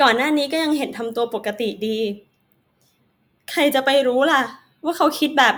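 Nothing in the speech stood out as a technical fault on listening.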